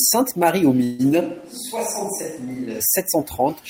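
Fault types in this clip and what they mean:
Call audio freeze: Packets were most likely held up in transit, so the jitter buffer ran dry. From 0.83 to 1.01 s the receiver stretches the last sound into a fading buzz or hiss for about 156 ms, then the speech resumes where it stopped, nothing lost but arriving later.
Switch to a distant microphone: The close microphone's feed likely dropped out, leaving a far-off pickup. From 1.23 to 2.79 s the speech abruptly turns roomy and thin, around 10 dB quieter, with room noise sitting only about 25 dB below it, then snaps back.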